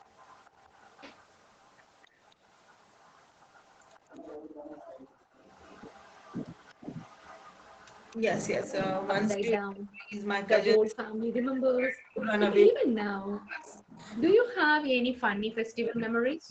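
Right from the start, 0.0 to 4.0 s, there's an echo leak. A faint copy of the speech trails about 252 ms behind, around 35 dB down. That's likely the far end's loudspeaker being picked up by its mic, with the echo canceller not quite scrubbing it out before sending it back. It's a ghostly doubling.

From 4.38 to 5.35 s the background gets gated by the echo canceller. The room tone drops by up to about 24 dB for roughly a second while the canceller clamps the mic down, then it comes back when the canceller lets go.

The leak returns from 5.35 to 9.36 s, a bit louder at about 30 dB below the speech, still 252 ms late. Inside that stretch, at 8.16 to 8.25 s, there's a brief dip of a few dB in the speech. This is speech suppressed in double talk, likely because the canceller couldn't tell the talker from the echo while both were active, so it pulled both down. From 9.37 s to the end that suppression gets heavy, cutting the speech by as much as about 40 dB.

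Echo scraps keep poking through at the same 252 ms delay: a short blip at 10.86 to 10.93 s, a fairly loud one at 12.19 to 12.25 s at only about 15 dB down, and another at 13.75 to 14.21 s. The whole thing tops out at 8 kHz, which fits an Opus call path at around 20 kbps.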